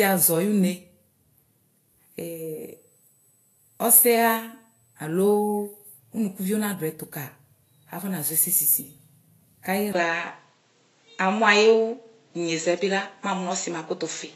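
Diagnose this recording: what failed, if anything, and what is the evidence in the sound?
Codec stage: grainy, hissy treble throughout and nothing above 14.1 kHz, likely Vorbis compression around 30 kbps; a spectrogram shows a flat ceiling with speckled, smeared highs.

Analogue wiring/power: USB whine, a steady 8 kHz tone about 40 dB below the speech from 2.61 to 5.05 s, drawn as one thin horizontal spectrogram line.

Driver/device stage: at 9.93 s a 20 ms gap in the waveform, then duller sound to the end. That is likely an input switched to a poorer device, with nothing above 7.7 kHz, a level step of about 5 dB and new noise about 50 dB down.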